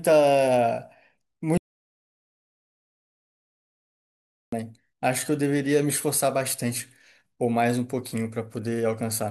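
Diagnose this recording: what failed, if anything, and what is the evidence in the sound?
An audio dropout to silence: the speech cuts off abruptly at 1.58 s and resumes mid-flow at 4.52 s, losing about 2.95 s. The gap is silent, a flat waveform and blank spectrogram with no room tone. The likely cause is a lost input link or device while recording continued.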